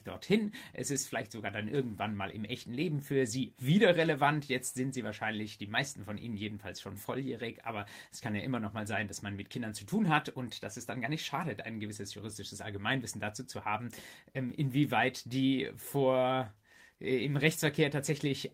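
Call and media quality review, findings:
Nothing to flag here; had a good listen and there's no audible fault anywhere in the clip, so no action needed on this one.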